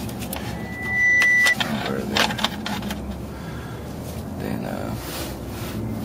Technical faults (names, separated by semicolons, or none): loudspeaker feedback squeal